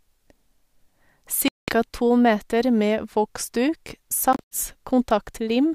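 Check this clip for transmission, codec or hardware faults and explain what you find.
Two brief holes interrupt the speech: 1.48–1.73 s, just before "to meter", and 4.33–4.57 s. Both are likely a Bluetooth dropout, where late packets were discarded and the output went silent before resuming as if it had played on. The first gap loses about 0.2 s of sound. The second breaks into several short gaps, the longest about 76 ms. A waveform shows flat, silent stretches, and a spectrogram shows blank vertical bands.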